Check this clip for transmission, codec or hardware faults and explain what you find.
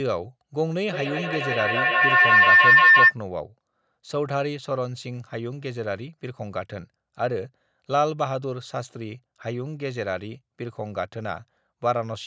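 One fault is present: a feedback howl. From 0.88 to 3.17 s, a loop between two devices keeps re-amplifying the sound. It swells to a tone near 2 kHz, about 12 dB above the speech, pulsing roughly every 150 ms.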